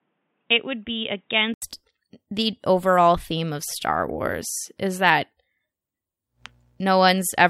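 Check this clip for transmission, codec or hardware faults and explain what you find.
One fault is present, at the start of the speech. An input switched to a poorer device runs from 0.0 to 1.62 s. The likely cause is the recording input coming from a lower-grade microphone or headset call profile for that stretch. Nothing above 3.8 kHz gets through, so the voice sounds dull and boxy, a few decibels quieter, and carries its own faint background noise. At 1.62 s there is a short gap of about 80 ms before the full-band sound returns.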